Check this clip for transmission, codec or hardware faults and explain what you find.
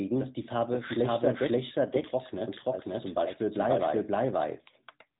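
Two faults run through the whole clip.

Doubled audio track: a second, likely slower capture path mixes in an identical copy about half a second late, at roughly equal level, so every syllable repeats with no room colour.

AMR narrowband mobile codec: mobile speech coding cuts everything above 3.8 kHz and models the speech with sparse pulses, fitting a mid-rate mode near 10 kbps. The speech sounds muffled and plainly buzzy.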